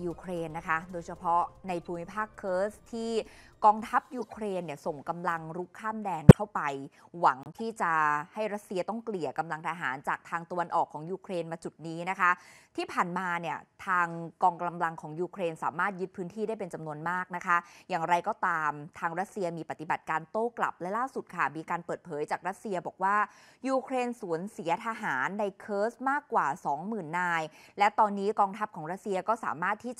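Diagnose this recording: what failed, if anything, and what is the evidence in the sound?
The codec stage failed: damaged compressed frames were decoded instead of concealed, so misread gains put energy at wrong frequencies. Corrupt frames are heard as a faint blip at 1.85 s, then bursts at 4.19–4.33 s, 6.29–6.38 s (near full scale) and 7.43–7.61 s, each spanning a handful of frames.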